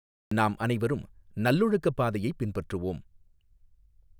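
The clip opens with about 0.31 s of digital silence, then the speech enters abruptly at 0.31 s on "நாம் அனைவரும் நல்லொழுக்கப் பாதையைப்". This is a cut-off start: capture began late, so the first sound is already under way, with no natural attack or fade-in.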